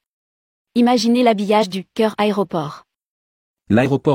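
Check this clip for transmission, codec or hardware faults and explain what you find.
Two short bursts of damaged data in a compressed stream interrupt this speech clip. The first runs from 1.58 to 1.64 s, just before "du cœur aéroport", and the second from 3.81 to 3.87 s. At each, corrupted bytes make the decoder misread frames, lose sync and hunt for the next valid header, producing a brief chirp, squawk, click or short hole of about 60 ms. A plain dropout would instead leave silence or a smoothed gap.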